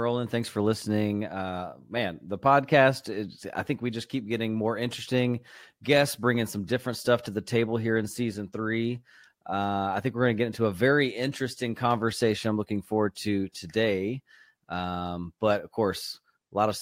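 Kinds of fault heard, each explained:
No kinds of fault are heard in this clip.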